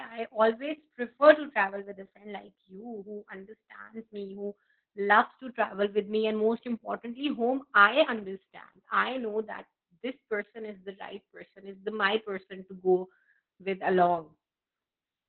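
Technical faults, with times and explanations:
Throughout: Opus voice compression. The speech is squeezed into a narrow band, with nothing above about 4.3 kHz, so it sounds muffled and boxy. The bandwidth fits a low bitrate of around 8 kbps. At that rate the codec runs its linear-prediction voice mode in narrowband. It models the voice's resonances and codes the buzz driving them only coarsely. That rough excitation gives the heavy hoarse, slightly robotic grain.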